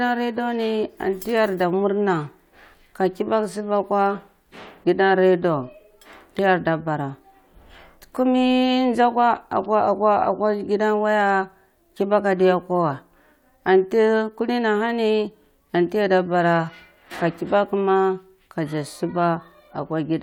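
Nothing here calls for comment, since no technical faults turn up anywhere in the recording.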